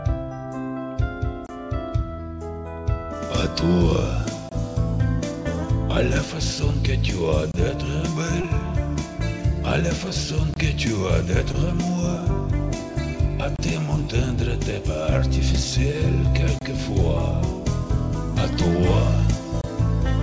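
Gap between chunks at 1.47, 4.49, 7.52, 10.54, 13.56, 16.59 and 19.61 s: the audio arrived in 3-second pieces with about 25 ms of silence at each join, heard as short holes. Short concealed packet loss at 8.42 and 11.52 s: roughly 20 ms failed to arrive in time, and the receiver extended the preceding sound to bridge it, leaving a brief smear or wobble. All of this sits on a call path with nothing above 8 kHz, which fits G.722 at 64 kbps.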